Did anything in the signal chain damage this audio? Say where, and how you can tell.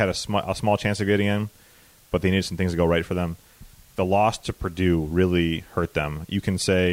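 Yes, low bit depth with dither at sample-format conversion. A constant, even hiss sits about 30 dB below the speech throughout, with no distortion. This fits dithered 8-bit rounding.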